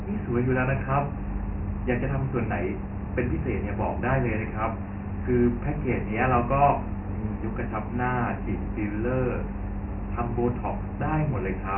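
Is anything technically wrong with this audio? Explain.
Yes. Throughout the speech, the sound carries Dialogic VOX ADPCM coding. This codec stores each sample as a 4-bit step relative to a running prediction, and the band stopping at 3 kHz fits about 6,000 samples a second, or roughly 24 kbps. With such coarse steps the damage here is heavy: a gritty hiss rides on the speech and the tone is dull and boxy. On a spectrogram everything above 3 kHz is blank, and the waveform shows granular noise tracking the speech envelope.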